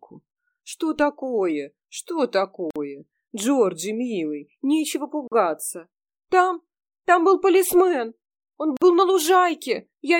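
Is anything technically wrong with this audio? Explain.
Yes. Gaps at joins of encoded pieces occur at 2.71 s, 5.28 s and 8.77 s, lasting about 52, 42 and 49 ms. Untrimmed encoder delay and last-frame padding leave silences with smeared edges before the sound resumes where it stopped.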